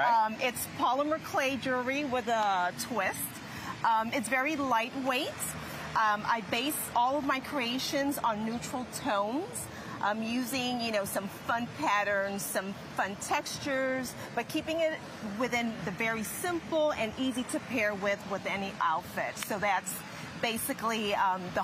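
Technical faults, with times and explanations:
No technical faults are audible anywhere in the recording.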